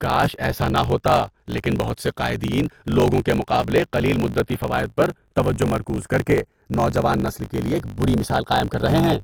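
Throughout the speech, the channels are drifting apart: clocks differing by about 30 parts per million let the inter-channel delay creep to roughly 0.2 ms. Summed to mono, this sounds like slow flanging, with comb notches sliding gradually across the spectrogram.

Also throughout, a block size mismatch (truncated) cuts off the tail of each block, which fits 1024-sample blocks being read short. It causes a 50 Hz buzz, with waveform discontinuities and vertical spectrogram streaks every 20 ms, and the speech runs 1.16 times fast with its timbre intact.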